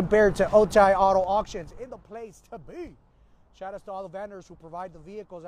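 Zipper noise runs from 0.74 to 2.18 s, while the level of the sound falls by roughly 20 dB. Instead of gliding down, the gain drops in 3 dB jumps about five times a second, and each jump leaves a small click, so a ticking rides on the sound throughout the move. A properly smoothed fade would cover the same drop without those regular ticks. Here the change is applied in coarse unsmoothed increments.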